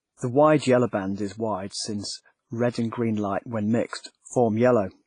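A speech recording carries heavy transform-codec damage throughout, likely WMA compression at a low bitrate fitting about 24 kbps. It sounds ringing and washy, with hiss breathing alongside the speech. A spectrogram shows a hard ceiling at 10.5 kHz and weak harmonics zeroed into gaps.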